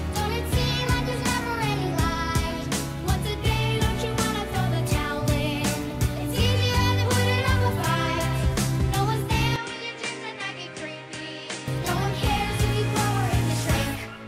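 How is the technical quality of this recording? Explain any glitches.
One glitch, from 9.56 to 11.68 s: the input likely switched to a poorer device. Content above 9.7 kHz disappears, level falls roughly 10 dB, and a faint new noise floor appears.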